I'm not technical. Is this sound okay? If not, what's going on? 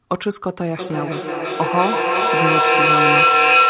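No. From 0.77 s to the end there is feedback echo between two devices. Each sound returns about every third of a second, piling up louder than the speech.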